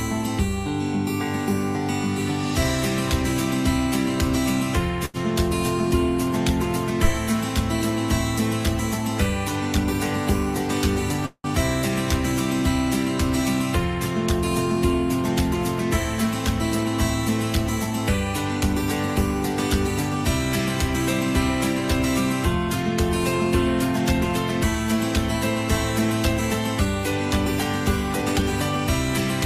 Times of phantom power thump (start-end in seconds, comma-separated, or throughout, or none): 7.04-7.13